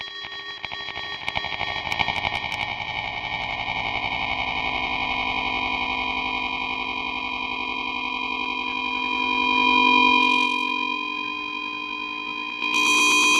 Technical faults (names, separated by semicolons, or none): none